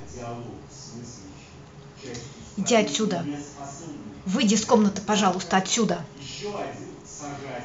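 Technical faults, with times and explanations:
No technical faults can be heard in the speech recording. Nothing in it calls for a time or an explanation.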